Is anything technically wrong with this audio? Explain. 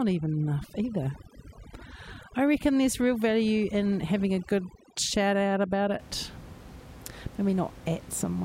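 Yes. From 0.0 to 5.99 s there is overdone noise removal: a noise reduction stage set far too aggressively keeps pulling individual frequency bands down or off wherever they sit close to its noise estimate. Quieter parts of the speech vanish with them, leaving a background that drops and breaks up into twinkling specks. The room noise, about 19 dB below the speech, is part of the recording itself.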